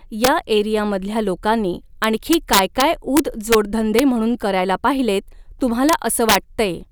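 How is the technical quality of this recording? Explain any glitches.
The recording is marred by integer overflow, heard as harsh cracks on the loudest speech at 0.24–0.28 s, 2.04–2.82 s, 3.17–3.55 s, 3.99 s, 5.89–5.93 s and 6.29–6.36 s. Peaks pushed about 1 to 4 dB past full scale wrapped around to the opposite sign instead of being held at the limit, so each one jumps across the whole range. That makes a violent, snapping crack, far sharper than the flattened buzz of ordinary clipping.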